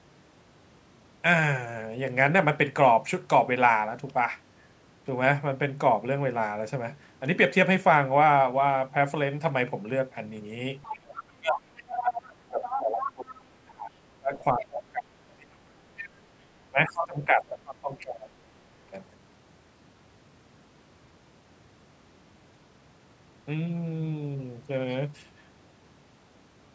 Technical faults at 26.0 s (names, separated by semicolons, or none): none